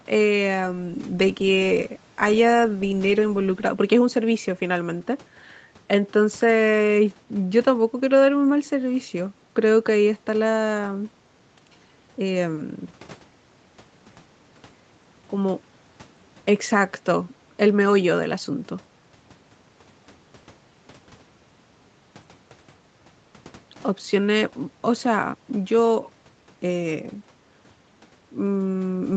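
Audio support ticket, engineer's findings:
No faults found in the speech; the top end stops at about 8 kHz, consistent with the call microphone processing and the wideband Opus setting on the WebRTC call path.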